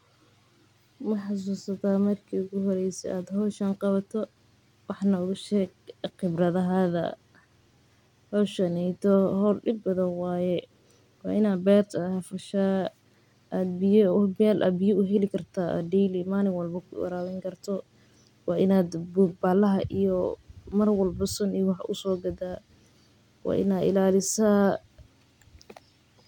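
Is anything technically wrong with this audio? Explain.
No, nothing is technically wrong with this audio.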